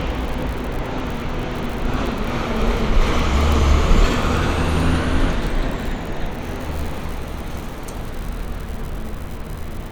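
Everyday sounds, with no technical fault audible anywhere.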